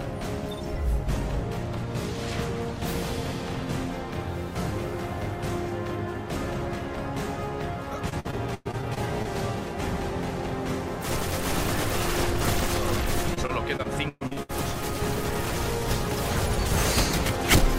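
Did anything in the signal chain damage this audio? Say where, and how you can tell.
Yes. Repeated packet loss (robotic sound) occurs twice, from 8.09 to 9.27 s and from 13.34 to 14.51 s, at the network stage. Each stretch has eight short dropouts, the longest about 108 ms and 120 ms. The receiver patches each hole by stretching the last sound, so roughly a quarter to a third of each stretch is synthetic fill. That fill, interrupted again and again, produces the choppy texture.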